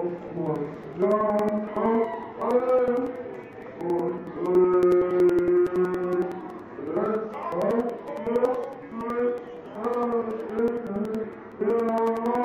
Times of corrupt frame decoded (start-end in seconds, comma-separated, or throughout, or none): none